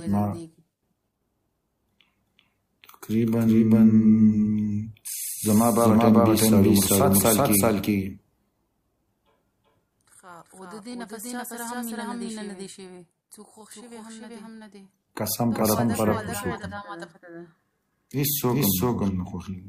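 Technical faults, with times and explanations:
Throughout, doubled audio track: every sound is followed by a second full-band copy arriving around 400 ms later at roughly the same level, so each onset is heard twice as a distinct repeat rather than a blur. The copy carries no decay or room colour, which rules out an acoustic echo or reverb. The likely cause is the same signal being captured a second time through a slower path, or an edit leaving two copies out of alignment.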